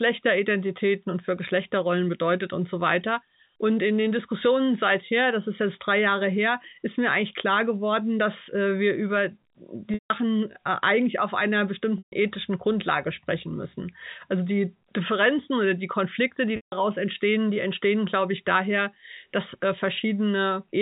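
Packet loss with pitch repetition hits at 9.94–10.10 s, 11.98–12.12 s and 16.56–16.72 s, gaps of 160, 140 and 160 ms that fit runs of 20 ms packets. The receiver loops the last pitch period, so each gap starts as a brief buzzy hold, fades into silence, then cross-fades back into the speech, all over narrowband G.711 telephone audio.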